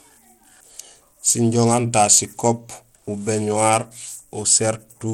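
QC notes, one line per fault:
throughout: Bluetooth SBC compression. The speech has a plainly audible gritty edge, with unsteady upper treble and nothing above 19.1 kHz. This likely comes from SBC coding at a rate near 96 kbps, starving the top sub-bands and coarsely quantising the rest.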